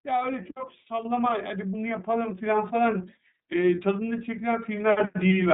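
Across the whole clip the speech carries the sound of the iLBC codec. The band stops at 4 kHz, and the voice has a rough, slightly synthetic edge. The damage is plainly audible and fits iLBC's 30 ms frame mode at around 13.3 kbps.

At 1.05 s the microphone volume steps up by about 6 dB in a single jump. The call software raised the device's input gain, so the voice and the background both become abruptly louder at the same instant.

From 3.75 to 3.80 s, one iLBC frame of about 30 ms is lost. The decoder fills the gap by repeating the last pitch cycle blended with noise, which sounds like a short, held, faintly buzzy vowel. Normal speech resumes immediately afterwards because each frame decodes independently.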